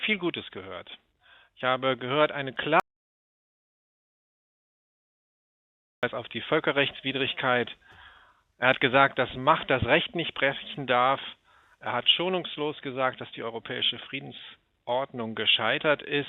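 At 2.80 s the sound stops dead and does not return until 6.03 s, leaving a gap of about 3.23 s of silence with no room tone or background underneath it, then resuming mid-flow as abruptly as it left. This is an audio dropout to silence: the input was likely lost for that stretch, through a disconnected source or failed link, while the recorder kept writing silence, so whatever happened in that interval is simply gone.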